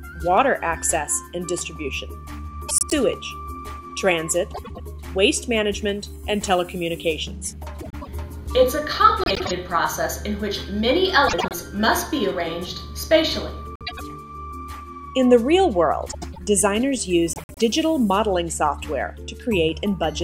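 Frames out of order at 2.69, 4.54, 7.81, 9.24, 11.28, 13.76, 16.11 and 17.33 s: two adjacent blocks of about 104.5 ms each, consistent with four-frame groups, play swapped, giving a garbled flutter.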